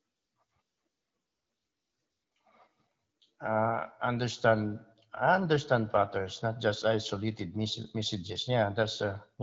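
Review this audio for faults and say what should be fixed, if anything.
Nothing here needs fixing; the speech is carried over the AMR wideband (HD Voice) codec at 12.65 kbit/s, and the light coding you'd expect at that rate is all there is to hear.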